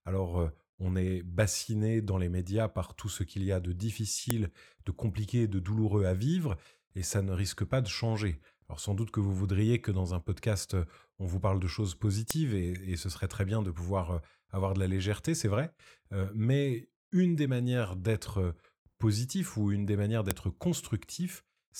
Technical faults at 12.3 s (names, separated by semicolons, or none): file header played as audio